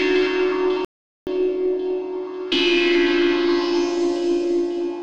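The audio cuts out abruptly at 0.85 s and stays silent until 1.27 s, a gap of about 420 ms, before sound returns. This is a playback stall, likely caused by the player running out of buffered data or its output thread being blocked. On a waveform the gap is a flat line with hard edges on both sides. On a spectrogram it is a clean vertical band empty across all frequencies.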